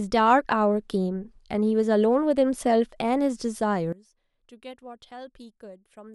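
From 3.93 s onward the speech drops about 21 dB, likely one channel inverted cancelling in mono; the waveform shrinks and the spectrogram fades overall.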